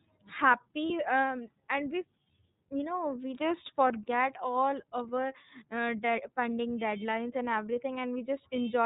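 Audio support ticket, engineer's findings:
iLBC codec, whole clip. Band-limited speech, nothing above 4 kHz. Plainly rough, synthetic texture. Independent frame coding, sound fits 30 ms frames at about 13 kbps.

Lost iLBC frames, 0.87 to 0.90 s. Brief held, buzzy vowel. Decoder repeated last pitch cycle with noise. Points to one lost 30 ms frame. Immediate recovery after.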